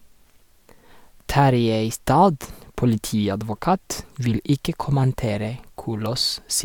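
No technical faults can be heard in this recording.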